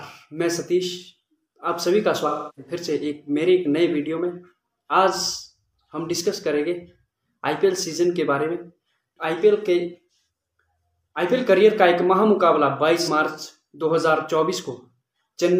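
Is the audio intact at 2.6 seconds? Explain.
No. The moment falls inside AAC frame loss with concealment, from 2.27 to 2.72 s. The decoder rebuilds the gap from the last good spectrum, which fits about seven lost frames. It sounds like a smeared, noisy, phasey patch.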